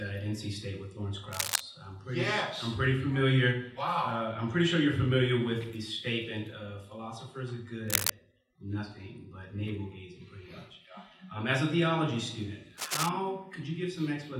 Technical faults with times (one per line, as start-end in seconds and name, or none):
1.32-1.61 cable scratch noise
7.88-8.11 cable scratch noise
12.77-13.09 cable scratch noise